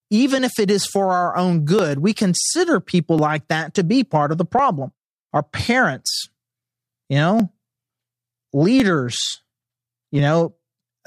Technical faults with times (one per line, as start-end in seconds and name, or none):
0.39-10.19 clock drift buffer slips